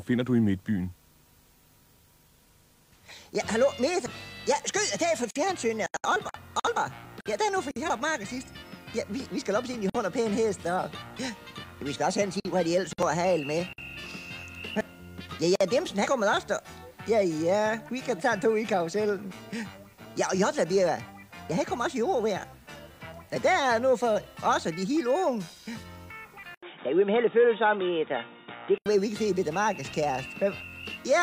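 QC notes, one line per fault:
26.55 to 28.86 s, likely an input switched to a poorer device. A silence of about 80 ms marks the switch. The sound turns dull and boxy, with nothing above 3.8 kHz. A faint new noise floor appears. Loudness stays about level.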